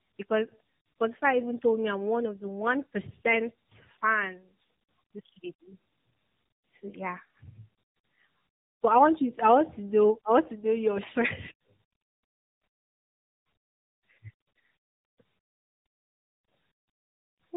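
From start to finish the speech carries tandem speech coding. The call seems to have gone through two AMR narrowband coders in a row, with a plain telephone-style link between them, so the second coder worked on the first one's already damaged output. The roughness and warbly smearing sound like a low-rate AMR pass, around 8 kbit/s, stacked under a higher-rate one. Nothing reaches above 3.8 kHz, so it's muffled too.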